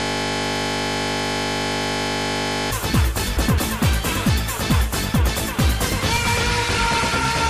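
From the very start until 2.71 s the audio is a steady buzz at 50 Hz, already under way when the clip begins: a system hang loop, where the computer or driver froze and the sound hardware kept replaying one 20 ms piece of its ring buffer about 134 times. At 3.37 to 3.59 s and again at 6.16 to 6.38 s, a short stretch flutters and garbles. These are frames out of order: two neighbouring blocks of about 104.5 ms each, consistent with runs of four frames, were decoded in swapped order, so no time is lost.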